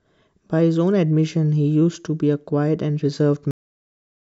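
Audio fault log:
3.51 to 4.36 s, cut-off end: the speech stops abruptly mid-sound at 3.51 s and falls straight to digital silence with no natural decay, because the final stretch of buffers was never written to the file or played out, leaving the sound truncated rather than finished.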